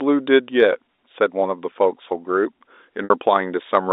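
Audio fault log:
0.96–0.98 s and 3.04–3.10 s: packet loss with pitch repetition. The 20 ms gap repeats the last pitch period as a brief buzzy hold. The 60 ms gap, consistent with three lost packets, fades toward silence before the audio cross-fades back.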